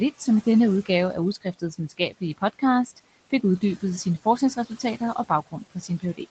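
At 1.41 to 2.22 s, right after "i denne udgave af", and again at 5.51 to 6.2 s, after "uddybet sine forskningsresultater og", the speech is cut by the noise suppressor. It mistakes quiet speech for background, pulling brief stretches totalling roughly a fifth of a second in each down by up to about 15 dB along with the room noise. The affected speech sounds swallowed and faint, not silent, which sets this apart from a dropout's hard gap.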